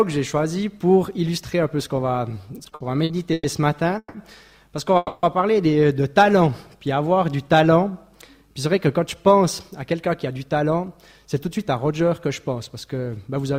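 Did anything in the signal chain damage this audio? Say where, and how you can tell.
Yes. Repeated stalls (stutter) at the network jitter buffer, 2.29–3.46 s: eleven short holds, longest 110 ms, fill about a quarter of the span as packets arrive late.

Call audio freeze at 3.98–4.16 s and 4.97–5.25 s: 160 ms and 260 ms of sustained, fading sound, likely from delayed packets emptying the buffer.

Jitter buffer speed-up at 8.42–9.41 s and 9.82–13.44 s: audio runs 6% fast at unchanged pitch. The buffer drops pitch periods, roughly 70 ms and 200 ms in total.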